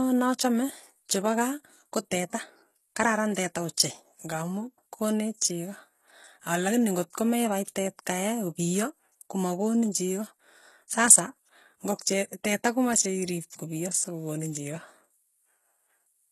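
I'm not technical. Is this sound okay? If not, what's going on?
No. The whole recording carries heavy HE-AAC compression damage, the likely cause being a low-quality HE-AAC setting. This method keeps the lower sounds and then fakes the upper treble by copying lower parts upward. The fake treble doesn't quite match the real voice. That is why the s sounds come across gritty, lispy or metallic. Nothing at all is present above about 12 kHz, so the very top sparkle is missing throughout.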